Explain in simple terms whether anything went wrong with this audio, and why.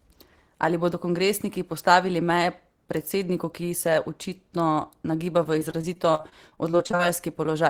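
From about 5.43 to 7.01 s the speech turns choppy and robotic, with short pieces dropping out. This is repeated packet loss: chunks of audio kept going missing in transit, and each hole, none longer than about 45 ms, was patched by stretching the previous sound.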